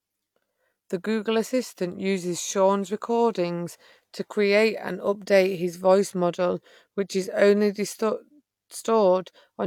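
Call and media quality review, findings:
Call and media quality review findings: no faults found in this speech clip.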